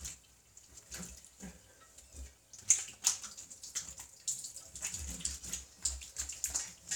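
No technical faults can be heard anywhere in this recording of sounds. There is nothing here that needs a time mark or a closer look.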